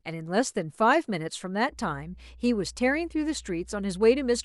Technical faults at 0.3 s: none

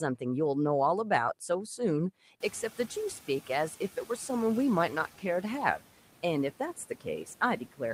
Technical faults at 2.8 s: noise suppressor artifacts

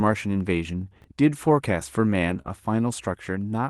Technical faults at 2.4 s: lost packet rebuilt from error correction; short concealed packet loss

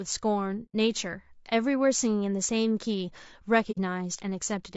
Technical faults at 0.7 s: low-delay AAC compression; AAC frame loss with muting

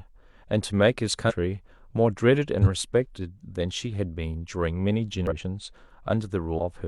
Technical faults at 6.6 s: compressed frames skipped

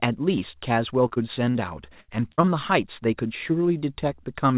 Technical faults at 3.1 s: none

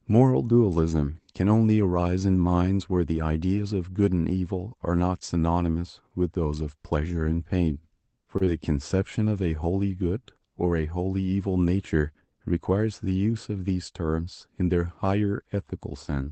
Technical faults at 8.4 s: short stall from a late packet; short concealed packet loss

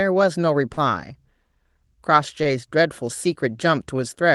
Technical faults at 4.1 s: none

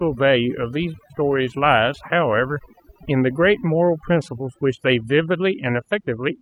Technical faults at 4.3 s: overdone noise removal

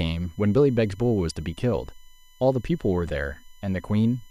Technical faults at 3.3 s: USB whine

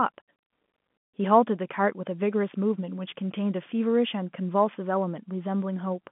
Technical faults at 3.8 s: none

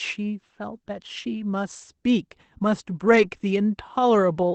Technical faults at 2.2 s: none

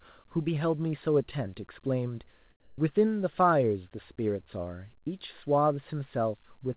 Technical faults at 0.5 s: none

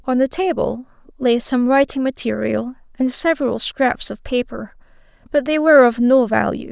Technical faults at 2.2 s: none

